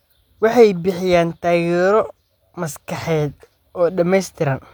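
Nothing in this bit of speech stands out as a technical fault at any point, so there's no problem to point to here.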